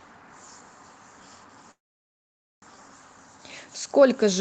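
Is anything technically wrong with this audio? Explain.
Yes. From 1.71 s to 2.64 s the sound stalls in a call audio freeze. A brief fading continuation of the last sound gives way to about 0.87 s of silence, and then the audio resumes exactly where it stopped. The likely cause is incoming packets being held up until the jitter buffer ran dry. Nothing is lost; everything after arrives about 0.91 s late. That sets it apart from packet-loss dropouts, which skip material. The call codec's roughly 8 kHz band limit is also audible throughout.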